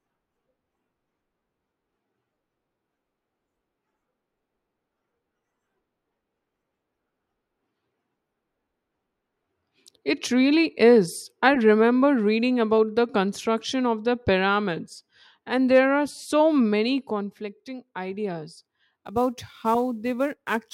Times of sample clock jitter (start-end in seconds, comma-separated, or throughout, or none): 18.95-20.74